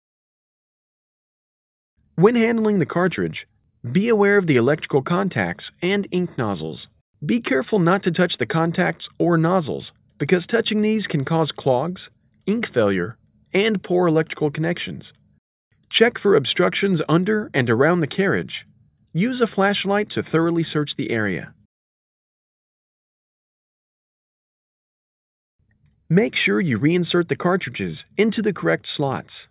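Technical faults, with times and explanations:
No technical faults can be heard anywhere in the audio, and the signal stays steady and intact throughout.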